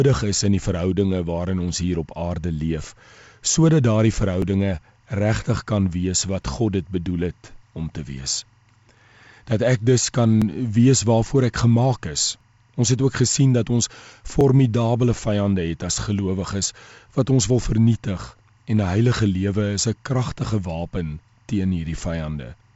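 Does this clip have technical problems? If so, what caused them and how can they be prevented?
Yes, two problems.

Timecode bleed runs from 1.71 s to the end: a faint chirping warble flipping between pitches near 1 and 2 kHz, roughly 45 dB under the sound. That's linear timecode at 23.976 frames per second leaking in from a neighbouring track or cable. Keep timecode lines physically separated and shielded from audio, and route LTC on its own track well away from program channels.

Periodic USB or driver dropouts show up as regular ticks every 2 s from 4.42 to 14.41 s. Each one skips about 4 ms of audio outright, so you hear a little jump rather than a gap. The even spacing points to a background task stalling the USB bus or audio driver on a timer. Hunt down and disable that polling task, or raise the driver buffer size so it rides through the stalls.

The 8 kHz top end comes from the call path's wideband codec, which fits G.722.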